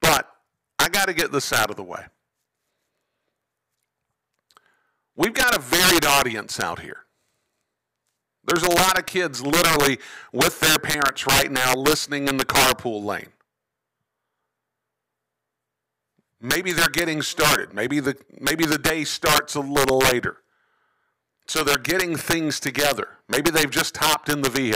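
Throughout the speech, integer overflow: gain pushed about 9 dB past the limit wraps around one percent of samples to the opposite sign, producing violent cracks on loud peaks.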